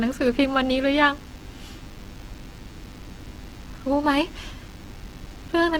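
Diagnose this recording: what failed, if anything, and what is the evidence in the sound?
A DECT cordless phone buzz runs through the whole recording, so the fault sits in the analogue wiring, where a nearby handset or base station's radio bursts get rectified into the audio path. The bursts repeat every 10 ms, giving a thin, steady buzz at 100 Hz with a dense harmonic series, roughly 25 dB below the speech. A spectrogram shows evenly spaced horizontal lines at 100 Hz multiples. The waveform shows a regular comb of spikes during pauses.

The speech sounds grainy and rough throughout, with tones turned noisy rather than clean. The most likely cause is Opus compression in its CELT music mode at a low bitrate, consistent with about 16 kbps. Short of bits, the encoder fills bands with folded or noise-like content instead of leaving gaps. On a spectrogram the upper bands look smeared and speckled, without the sharp holes MP3 leaves, and content reaches 20.1 kHz.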